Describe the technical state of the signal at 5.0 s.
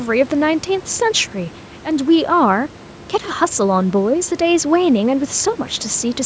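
At 5.0 s the audio is intact, with the speech carried cleanly through the call's microphone processing and the room noise sitting about 23 dB below it.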